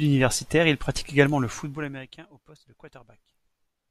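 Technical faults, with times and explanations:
1.47–2.22 s, zipper noise: after "il pratique également le", the gain drops about 25 dB in unsmoothed 2 dB steps, roughly twenty a second, each jump clicking into a rapid ticking zip.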